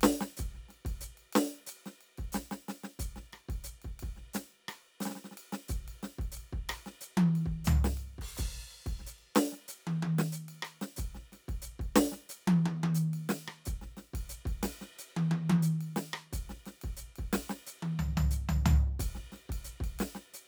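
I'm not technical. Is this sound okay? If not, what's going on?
No. At 18.50 s the music has one sharp click, most likely dropped samples: a tiny sliver of audio, well under a millisecond, went missing, making the sound jump.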